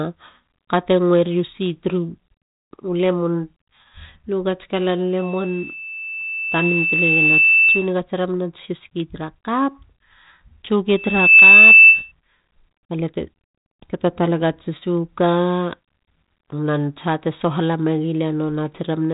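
A speech recording with loudspeaker feedback squeal breaking out twice. A steady 2.6 kHz tone starts at 5.18 s, right after "lu gats kalan", swells over about two seconds to sit a little above the speech, and stops at 7.93 s. It returns at 10.95 s, building much faster and ending up well above the speech before it cuts at 12.12 s. The mic is hearing its own loudspeaker, and at that one frequency the loop gain tops unity. The band stops near 3.8 kHz with light coding grain, which fits 32 kbit/s G.726 ADPCM.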